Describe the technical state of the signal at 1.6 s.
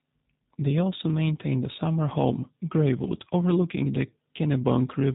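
At 1.6 s the speech passes through the G.729 codec for the whole clip, rebuilt from low-rate filter and pulse models, likely near 8 kbit/s; nothing above about 3.8 kHz survives, so it sounds rough and synthetic.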